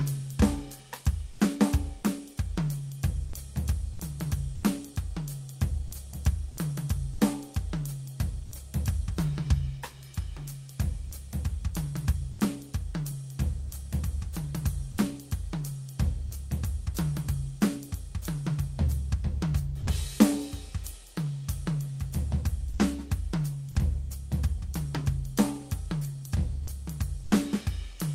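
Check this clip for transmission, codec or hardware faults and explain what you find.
Several transmission faults turn up in this music, all pointing to a sender that stops transmitting when its detector thinks nothing is playing.

Comfort noise in place of the background shows up from 1.31 to 1.39 s. For about 80 ms the real background, sitting about 22 dB below the loud passages, gets swapped for a flat, featureless hiss roughly 4 dB off the true level. That's likely discontinuous transmission in an Opus-style codec: the sender goes quiet, and the receiver fills the gap with synthetic noise shaped only roughly like what was there.

Sound chopped by the voice detector shows up across five stretches: 3.29 to 8.51 s, with about 400 ms replaced in total, then 11.09 to 12.39 s (100 ms), 13.69 to 14.97 s (80 ms), 22.69 to 23.75 s (140 ms), and 26.63 to 27.31 s (120 ms). The detector likely flips between sending and not sending several times in each stretch. 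Quieter parts of the music get cut and filled, so the playback stutters.

Sound dropped by the voice detector happens twice, briefly. There's a 20 ms gap at 16.29 to 16.31 s and a 60 ms gap at 19.81 to 19.87 s. In each, the detector likely mistook a quiet bit of the music for background and stopped sending. That music is lost and replaced by steady fill noise until transmission picks up again, so you hear a tiny hole rather than a repeated flicker.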